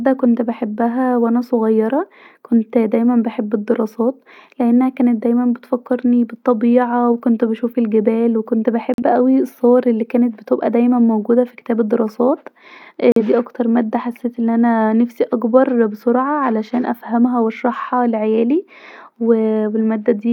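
At 8.94 to 9.03 s, right after "وكنت بشوف الجبال وكنت" and before "اوي الصور الي", the speech drops to silence in a digital broadcast dropout, and it does so again at 13.12 to 13.22 s, just before "اكتر ماده حسيت أن". Each hole points to a single corrupted frame of about 43 ms that the receiver muted. Unlike a splice or concealment glitch, nothing is smeared or repeated. The sound simply vanishes and resumes with that material gone.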